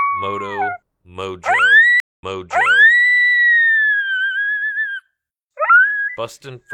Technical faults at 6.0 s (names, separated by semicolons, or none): none